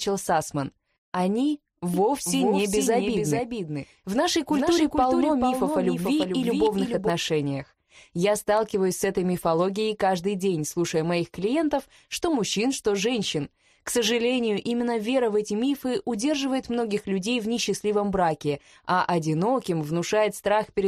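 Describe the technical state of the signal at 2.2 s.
At 2.2 s you're inside a doubled audio track, running from about 1.94 to 7.10 s. A second full-band copy trails roughly 400 ms behind, a few dB quieter, with no decay or room colour, and it cuts in and out abruptly. It's likely a slower second capture path mixing the same sound in again.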